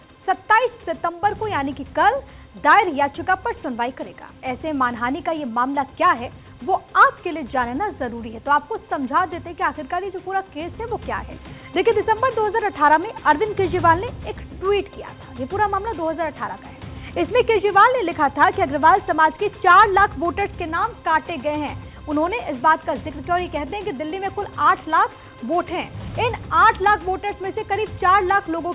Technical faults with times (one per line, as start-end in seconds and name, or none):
none